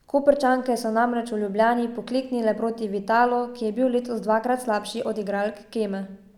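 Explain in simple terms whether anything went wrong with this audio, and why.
Listening closely to the speech, nothing stood out as having gone wrong anywhere in the recording.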